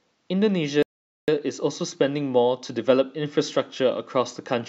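At 0.83 s the speech cuts off mid-flow into dead silence for about 455 ms, picking up again at 1.28 s. This playback stall was likely caused by the player running short of buffered data or its output thread being blocked until it recovered.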